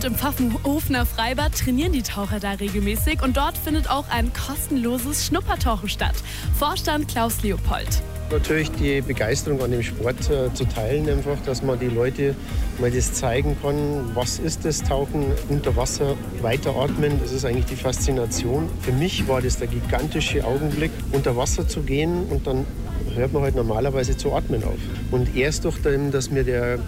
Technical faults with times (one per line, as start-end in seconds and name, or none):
0.00-26.87 low bit depth without dither